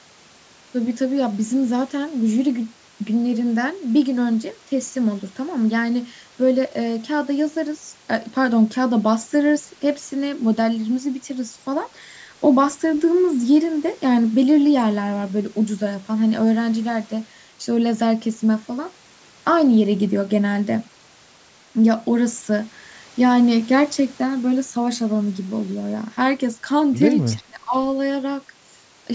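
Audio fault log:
27.32–27.42 s echo leak: a faint, delayed copy of the speech trails it by about 370 ms, far quieter than the main level, and surfaces as a brief scrap. It is likely loudspeaker sound that the echo canceller failed to remove and sent back.
27.34–27.75 s speech suppressed in double talk: the speech dips sharply, nearly vanishing at its deepest, across roughly four tenths of a second overlapping the echo. The echo canceller likely could not separate the talker from returning echo while both sounded together, so it turned everything down.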